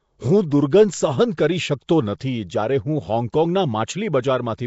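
From start to finish the speech has likely been through Nellymoser compression, the Flash-era Nellymoser Asao microphone codec. It codes short blocks with a fixed, tiny budget of two bits per sample and replaces bands it cannot afford with synthetic noise. The damage is plainly audible. A grainy hiss hangs around the speech, everything sounds smeared and submerged, and nothing remains above 7.7 kHz. That thin sound points to a rate near 32 kbps.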